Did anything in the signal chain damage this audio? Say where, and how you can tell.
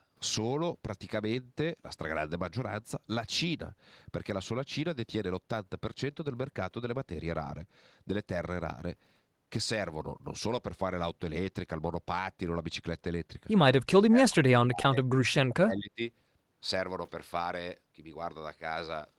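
Yes. The speech sags by about 35 to 40 dB from 13.89 to 14.98 s and from 15.31 to 16.01 s. This is likely speech suppressed in double talk in call processing, where the echo canceller mistook this talker for echo.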